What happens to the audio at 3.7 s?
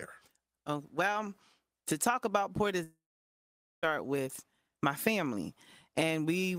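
Long network dropout, 2.83 to 3.85 s: with data likely lost in transit, the last sound fades as a brief buzz, leaving silence through 3.7 s.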